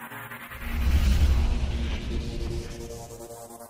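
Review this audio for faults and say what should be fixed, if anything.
Nothing here needs fixing.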